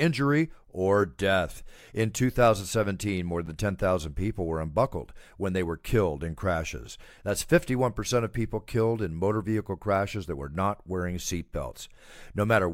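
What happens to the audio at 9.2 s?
Nothing goes wrong at 9.2 s; the speech runs through that moment intact, with no dropout, click or other fault.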